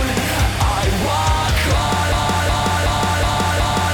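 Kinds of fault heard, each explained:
Broken-record loop: the playback or streaming chain most likely stalled and kept resending the last short fragment it held instead of new audio. From 2.12 s the same 0.37 s piece of sound plays back to back, repeating exactly five times and running until the clip ends. It cycles with a rhythmic, stuck quality, and whatever audio should have followed in that final stretch never arrives.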